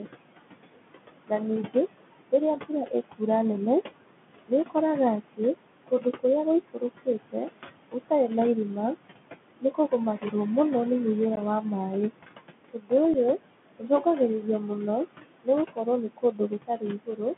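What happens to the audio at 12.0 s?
At 12.0 s the speech carries noise suppressor artifacts, present through the whole clip. The suppressor pulls down bands it judges to be steady noise by about 20 dB each frame, so the room noise, roughly 10 dB under the speech, drops away in gaps and swells back beneath syllables.

The same moment also shows the Bluetooth CVSD headset codec, again continuous. Audio is confined to roughly 150 Hz to 3.5 kHz, and the one-bit adaptive delta coding, which fits CVSD's 64 kbps stream, plainly distorts: sibilants turn scratchy, loud high content outruns the step size and distorts, and a granular hiss sits under the voice.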